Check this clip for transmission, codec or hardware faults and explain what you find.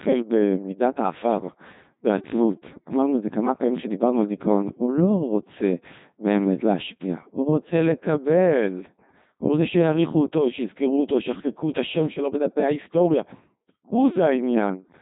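One fault runs through the whole clip: Codec 2 vocoder coding. The decoder rebuilds the speech from pitch, voicing, energy and spectral envelope alone, so the waveform is lost. Speech sounds robotic and buzzy, with heavy damage, and nothing above 3.8 kHz. This fits a 2.4 kbit/s mode.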